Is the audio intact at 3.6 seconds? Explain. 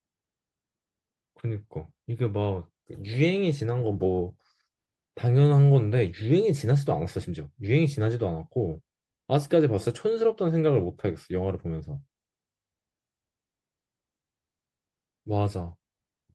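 Yes, the speech at 3.6 seconds is intact, with no audible dropout, click or distortion at that moment.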